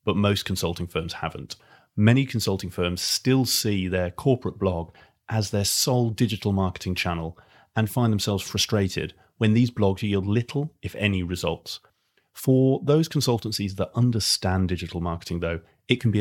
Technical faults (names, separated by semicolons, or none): none